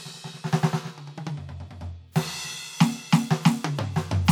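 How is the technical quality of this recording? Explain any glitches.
No technical faults can be heard in this music recording: the signal stays continuous and stable throughout, with nothing breaking up, dropping out or distorting.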